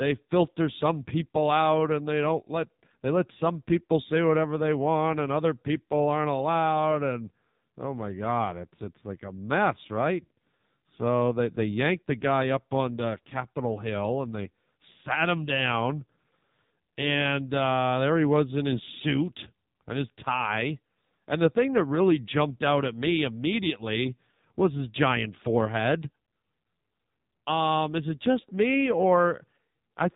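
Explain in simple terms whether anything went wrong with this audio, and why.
Throughout, the speech has the AMR narrowband mobile codec's phone sound: nothing above 3.8 kHz, plus a heavy buzzy, synthetic texture that simple muffling wouldn't add.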